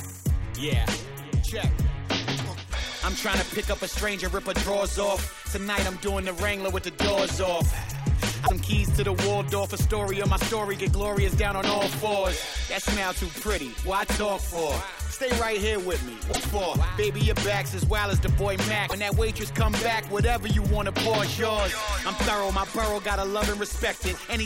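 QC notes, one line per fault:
8.43–8.50 s, 16.29–16.39 s, 18.85–18.93 s: damaged data in a compressed stream. Brief glitches where corrupted frames are misread and the decoder loses sync before finding the next frame.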